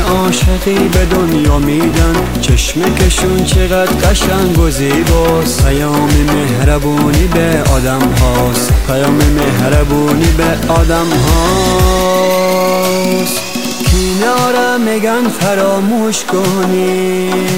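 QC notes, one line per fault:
Throughout, low bit depth without dither: grainy, gritty distortion that shifts with the sound, roughest in quiet passages, where the faintest parts sputter between two levels or cut to silence. The likely cause is a signal truncated to only a few bits with no dither, which fits about 5 bits. The rounding error tracks the waveform, so the noise sits only about 25 dB below the signal and pulses with it.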